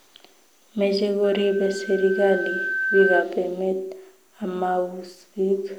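A microphone-to-loudspeaker loop runs away, so from 1.23 to 3.27 s a 1.6 kHz loudspeaker feedback squeal swells to about 5 dB above the speech.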